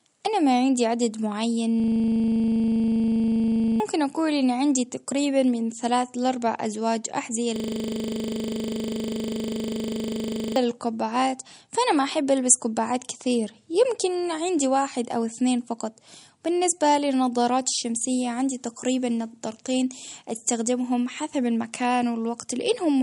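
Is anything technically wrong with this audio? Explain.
Yes, there are two problems. Throughout the speech, nothing reaches above 11.2 kHz, and the sound is watery and swirly, with smeared consonant onsets. This is likely MP3 compression at a low bitrate, which plainly fits something near 48 kbps. Short of bits, the encoder chops the treble at a fixed cut-off and drops weak frequency lines frame by frame. On a spectrogram, that shows as a flat ceiling at 11.2 kHz with flickering holes below it.

From 1.8 to 3.8 s and again from 7.56 to 10.56 s, a system hang loop replaces the audio. The machine froze while the sound hardware kept replaying one 40 ms buffer, so it produces a steady 25 Hz buzz, and roughly two and three seconds of speech are lost. The waveform shows identical 40 ms cycles repeated end to end.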